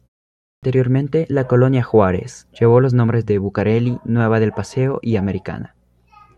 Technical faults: clipped start after a pause

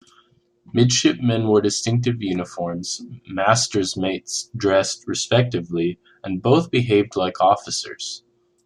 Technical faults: none

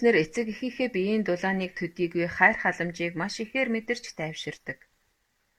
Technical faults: none

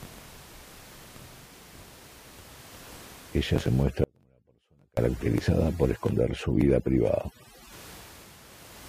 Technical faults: overdone noise removal; audio dropout to a faint residue

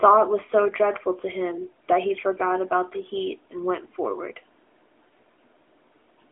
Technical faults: none

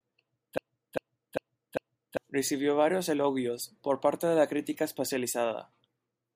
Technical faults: broken-record loop

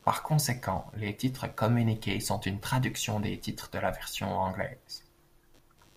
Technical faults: computer activity noise

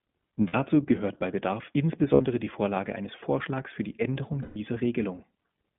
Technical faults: iLBC codec; lost iLBC frames

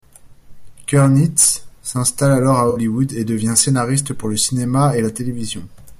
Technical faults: AAC frame loss with concealment

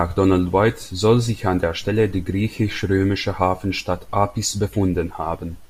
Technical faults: none

